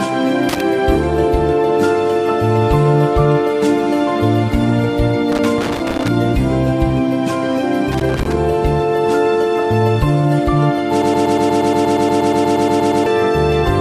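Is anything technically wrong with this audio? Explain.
Yes, there are two kinds of fault.

Loose connector crackle occurs three times: 0.49 to 0.61 s, 5.32 to 6.08 s, and 7.92 to 8.38 s. A worn or dirty contact keeps making and breaking, so the signal is chopped into fragments, and any DC on the line adds pops. It sounds like an irregular burst of scratching. A waveform shows jagged dropouts and spikes, and a spectrogram shows scattered full-band vertical streaks.

A broken-record loop runs from 11.02 to 13.06 s. A fragment about 0.12 s long repeats back to back, around 17 times. This likely comes from a player, encoder or stream that stalled and kept resending the last piece it held, so the audio due in that span is lost. It sounds like a rapid mechanical stutter. A waveform shows an identical shape tiled at a fixed period, and a spectrogram shows the same pattern stamped repeatedly.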